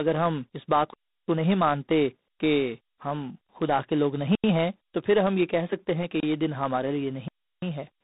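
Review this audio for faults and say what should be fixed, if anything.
Tandem speech coding runs throughout. The audio was decoded and re-encoded at each link, so every coder compounded earlier losses, leaving rough, noisy sound with nothing above 3.8 kHz, consistent with ADPCM and A-law stages. Keep the call on one codec end to end, or pass the coded stream through transparently instead of transcoding at each border.

Blocks of digital silence occur at 0.94–1.28 s, 4.35–4.44 s, 6.20–6.23 s and 7.28–7.62 s, lasting 341 ms, 85 ms, 28 ms and 341 ms. Output buffers were likely left unfilled, so the sound drops abruptly to silence and back, which fits 16384- and 4096-sample buffers. Give the audio thread enough priority and buffer headroom that every output block is filled before its deadline.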